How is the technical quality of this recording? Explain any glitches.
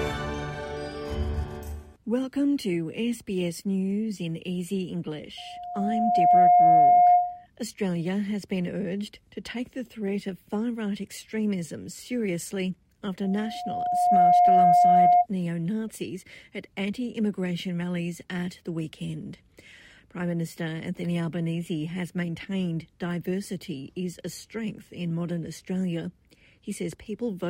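The recording is marred by loudspeaker feedback squeal, from 5.37 to 7.46 s and again from 13.23 to 15.26 s. The microphone re-amplifies its own loudspeaker, and at 712 Hz loop gain exceeds unity, so a pure tone swells over about a second to roughly 15 dB above the sound.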